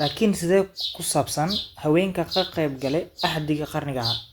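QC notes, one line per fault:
No faults heard on the speech recording; nothing to flag.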